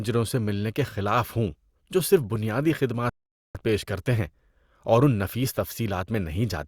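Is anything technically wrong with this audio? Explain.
Yes. At 3.09 s the player's playback buffer runs dry and it halts until more of the stream arrives, a rebuffering stall. The speech drops to silence until 3.55 s, then picks up exactly where it stopped, with nothing missing but about 0.46 s of dead air added.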